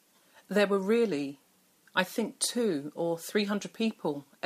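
No technical faults can be heard in this recording.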